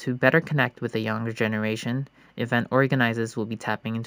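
Imaging from linear upsampling runs through the whole speech clip. The rate was raised by joining neighbouring samples with straight lines, which filters poorly, so the top of the band is softened while a faint mirror of the spectrum survives above it. The first image sits between 8 kHz and 16 kHz, which fits audio first made at 16 kHz, and lies roughly 35 dB below the signal. It adds a light metallic shimmer to sibilants.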